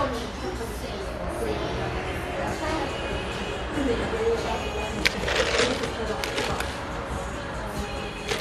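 No technical faults occur at any point in this audio, so there is nothing to describe in time order.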